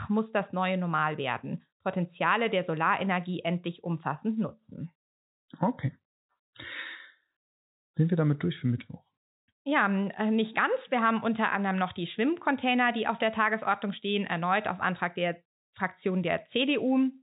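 No technical faults are audible.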